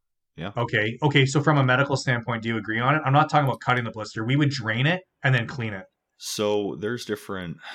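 Right from the start and all the way through, there's a steady tick running under the speech, ten times a second, and it's only there while someone's talking. That's the resampler restarted on every block: each 100 ms chunk got converted on its own, probably from 44.1 kHz up to 48 kHz, so the filter had no real neighbouring samples at the chunk edges. Each seam picks up a small error, and those errors line up into that regular 10 Hz ticking.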